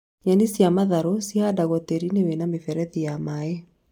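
No technical faults can be heard anywhere in this recording.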